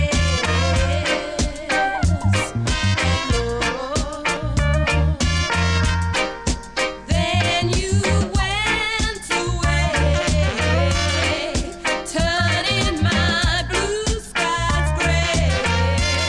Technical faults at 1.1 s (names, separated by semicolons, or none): none